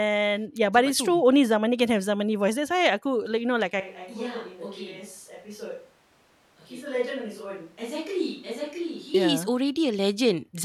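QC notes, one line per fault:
3.80–9.14 s, switch to a distant microphone: right after "you know like" the speech abruptly turns roomy, hollow and thin in the bass, about 10 dB quieter, with room noise about 25 dB below it. The close microphone likely dropped out, leaving a farther one until the sudden return.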